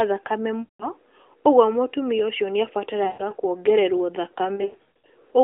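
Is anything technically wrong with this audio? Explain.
Yes, there's lost AMR speech frames, in three spots, over a narrowband mobile link with the usual 300 Hz to 3.5 kHz band and only light codec colouring. At 0.60–0.90 s a solid 200 ms gap, about ten 20 ms frames, gets smeared out as the decoder keeps replaying the last good pitch and vocal-tract settings with falling gain, so it drags and fades. At 3.04–3.35 s and 4.56–5.06 s the losses are scattered in shorter runs, giving choppy dips and warbles before the sound recovers.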